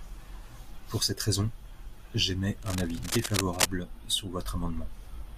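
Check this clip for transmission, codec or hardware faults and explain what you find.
One hardware fault is present. From 2.62 to 3.68 s, cable scratch noise: dense, uneven scratching roughly as loud as the speech, likely from a worn cable or connector shifting and rapidly changing its contact resistance.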